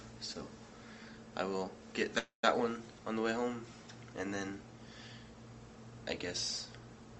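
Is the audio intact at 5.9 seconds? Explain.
Yes, the audio at 5.9 seconds is intact, passing through the WebRTC call path with no fault at that moment.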